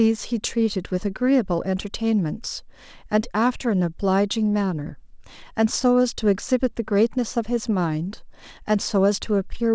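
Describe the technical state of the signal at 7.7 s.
At 7.7 s the speech is intact, with no dropout, glitch or distortion, and only the G.722 call path's band limit, with nothing above 8 kHz.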